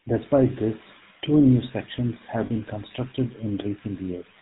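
A speech recording with a buzzy, gravelly roughness and nothing above 4 kHz throughout, the sound of the GSM full-rate codec, consistent with a 13 kbps stream. Just after "two new sections have", from 2.46 to 2.51 s, the voice briefly freezes into a rough metallic ring: lost GSM frames, where the decoder repeated the last good frame for 40 ms, which fits two dropped frames.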